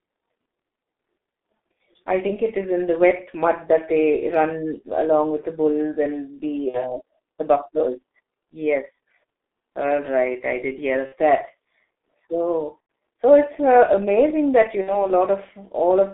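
G.723.1 codec damage runs through the whole speech clip. The line is confined to roughly 250 Hz to 3.6 kHz, so the speech is thin and muffled. The coding rate is very low, about 6.3 kbit/s, and works in long 30 ms blocks with a slowly updated vocal model. That leaves heavy hoarseness and smeared consonants, with sibilants and plosives losing their edges.

VoIP packet loss concealed by the speech codec first appears from 6.68 to 6.97 s, then from 11.06 to 11.15 s just after "right I did hear". It returns from 12.80 to 12.89 s just before "so it's uh amazing", and from 14.81 to 15.07 s after "it's uh amazing that". Each time, about 60 ms of audio is missing (90 ms at 12.80 s), which fits two or three lost 30 ms frames. The decoder fills the gap by repeating its last pitch and filter at falling gain, giving a brief buzzy tone or coloured noise that fades. Because each frame builds on the one before, the voice stays weak or distorted past the gap.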